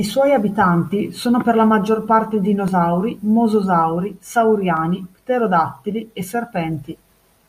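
Blocks of digital silence land at 2.68 s and 4.77 s, likely where the output buffer went unfilled, and the sound cut out with no fade. The first hole lasts 0.67 ms, which fits a 32-sample block, and the second 2.4 ms. Both are short enough to be heard as a tick or dip rather than as silence.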